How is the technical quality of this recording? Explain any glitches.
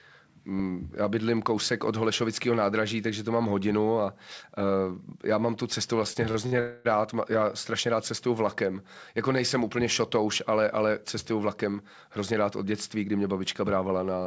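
Three network glitches stand out in this call recording, and the top end stops at 8 kHz, which fits a wideband call codec like G.722.

Repeated stalls (stutter), 6.04 to 6.55 s, right after "já mám tu cestu": packets arrived late, so playback hiccups four times, each gap bridged by stretching the last sound, the longest about 56 ms.

Call audio freeze, 6.60 to 6.88 s: a roughly 250 ms hold where the last sound lingers and fades, likely from delayed packets draining the jitter buffer.

Jitter buffer speed-up, 11.31 to 14.06 s, after "úplně šotouš ale ale": the receiver trims tiny pitch-period slices to catch up, so the speech runs about 8% fast at unchanged pitch, shaving off around a fifth of a second.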